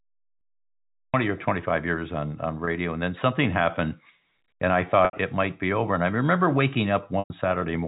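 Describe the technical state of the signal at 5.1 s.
Right there you've got packet loss with pitch repetition, from 5.05 to 5.13 s, between "and I" and "it might be over". The receiver loops the last pitch period over the 80 ms gap and fades it out, so you hear a brief buzzy hold sliding into silence.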